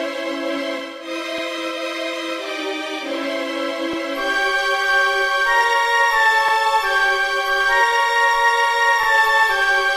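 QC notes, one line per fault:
1.38–1.43 s, 3.93–3.98 s, 6.48–6.53 s, 9.03–9.08 s: overlapping chunks. The audio arrives in 2.5 s blocks, and each new block begins 50 ms before the previous one finished. That 50 ms slice plays twice at every join. The repeat breaks the waveform's continuity, so each join is heard as a brief stutter or click. Because the block length is fixed, these stutters recur at a steady interval of about 2.5 s.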